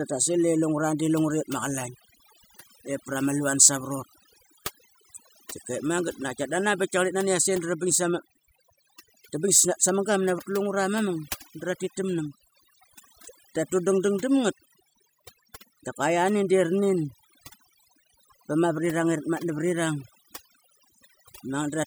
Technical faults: overdone noise removal

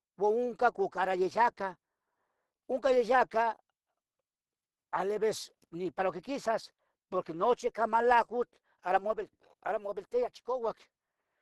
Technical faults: Opus compression

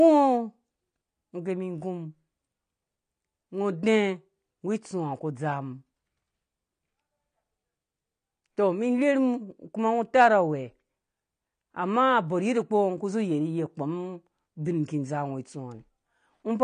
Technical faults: AAC compression

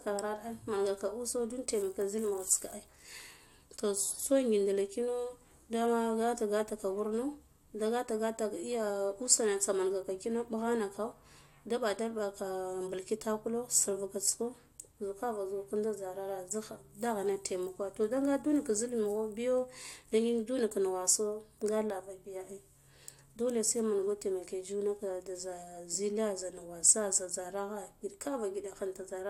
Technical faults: none

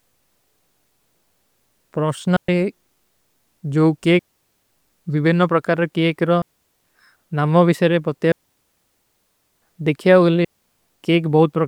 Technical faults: digital wireless dropout

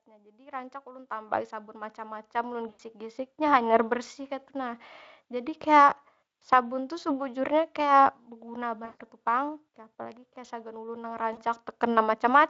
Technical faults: automatic gain rising; VoIP packet loss concealed by the speech codec; automatic gain falling

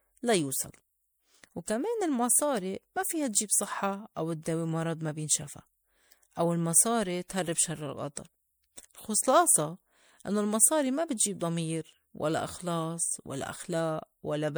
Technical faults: generation loss

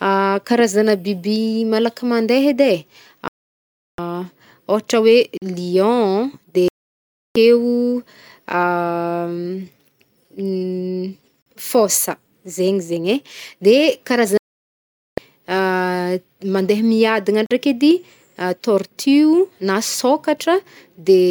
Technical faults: digital broadcast dropout; gap between chunks

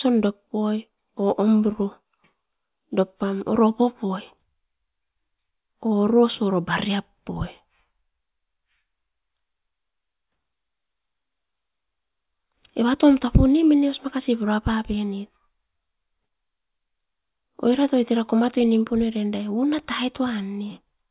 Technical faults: none

